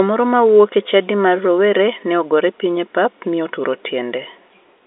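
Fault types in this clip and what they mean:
No faults detected in this speech clip.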